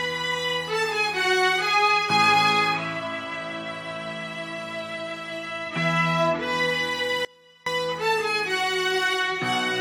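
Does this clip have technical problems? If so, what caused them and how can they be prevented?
Yes. The signal feeding the recording was most likely interrupted briefly, a momentary break in the source or its connection while the path downstream stayed live. The result is an audio dropout to a faint residue from 7.25 to 7.66 s: for about 0.42 s the sound cuts out abruptly and only a faint trace leaks through, roughly 30 dB below its normal level, before returning just as suddenly. Securing connectors and cables and monitoring the input level during recording prevents this.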